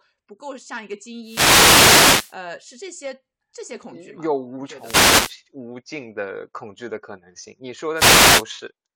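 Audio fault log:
1.21–2.37 s, 4.78–5.37 s and 7.94–8.46 s, wireless microphone noise hit: three bursts of static lasting about 1.2, 0.6 and 0.5 s swish in over the speech. The analogue FM radio link fades as reflected signals cancel the direct one, so receiver hiss rises and partly buries the speech. On a spectrogram each burst is a broadband wash of noise filling the gaps between speech harmonics; on the waveform the noise floor swells, blurring the speech envelope.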